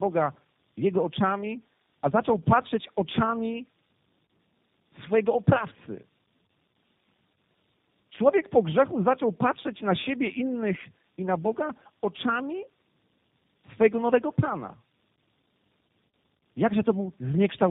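Tandem speech coding runs throughout the speech. It passed through CVSD, AMR-NB and G.729A, each recoding the last's damage. Result: rough, muffled, warbly, nothing above 3.8 kHz.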